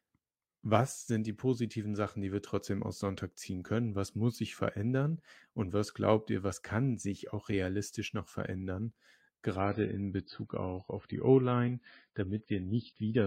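At 9.60 s the speech drops abruptly to an adaptive stream at a lower bitrate, and stays there until the end at 13.26 s. The player switched to a cheaper version of the stream, likely because the connection slowed. There is no gap at the switch. The quality simply falls. Nothing remains above 5 kHz, so the speech turns dull and muffled. Codec artefacts rise, which fits a fall from roughly 128 kbit/s MP3 to about 16 kbit/s.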